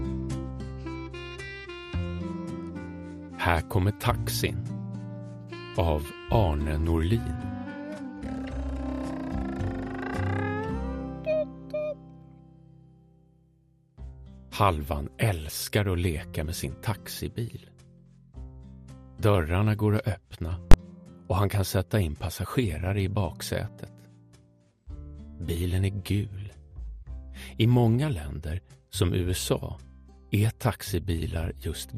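The audio sounds dull and gurgling throughout, with upper bands flickering and grainy quantisation, likely MP2 compression at a low rate near 80 kbps rather than plain low-pass filtering. DAB burbling appears from 1.25 to 1.49 s and again at 18.90 s: short blips of noise in single sub-bands from bit errors under weak reception, unlike steady codec grain. From 20.72 to 20.74 s, invalid numbers at full scale produce one loud bang lasting about 21 ms, which fits a 1024-sample block pinned at one extreme value, far harsher than a click or dropout.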